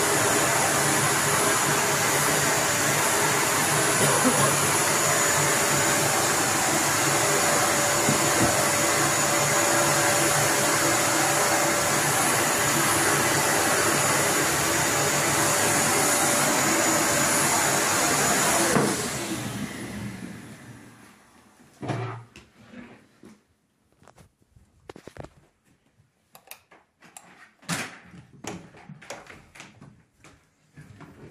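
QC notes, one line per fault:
0.54, 8.14, 19.17 and 28.45 s, damaged data in a compressed stream: each is a brief glitch of about 10 to 15 ms. Corrupted bytes made the decoder misread the frame there, lose sync and jump to the next valid frame header.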